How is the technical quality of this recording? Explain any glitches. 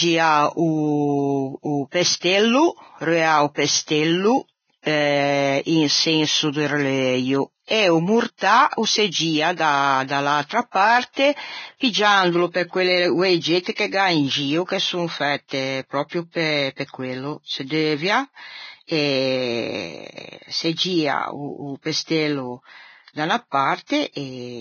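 The technical quality is poor, with heavy lossy coding throughout and several smeared attacks.

Vorbis compression, audible across the whole speech clip, is the likely cause of the dull, grainy character. Nothing is present above 6.6 kHz, and the treble that remains is hissy and rough, which points to a very low bitrate of around 18 kbps. At that rate the encoder keeps only a coarse spectral outline and replaces fine high-frequency detail with noise of similar energy. Sibilants and consonant edges come out fuzzy and blurred as a result.

Pre-echo occurs four times: at 4.82 to 4.86 s (39 ms), at 9.56 to 9.59 s (26 ms) just after "mortâ o se gio", at 13.63 to 13.66 s (30 ms) just after "parte piggiandolo pe quelle", and at 13.75 to 13.78 s (33 ms). Each time a sharp onset lands late in a transform block. The quantisation noise meant for the loud attack spreads back into the silence before it, so a brief hiss precedes the sound and its start is softened.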